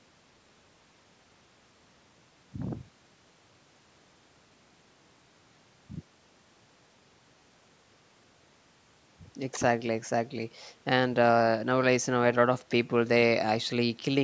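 Nothing here points to a technical fault: the speech simply carries the signature of a call's microphone processing working as it should, with the top end stopping at 8 kHz.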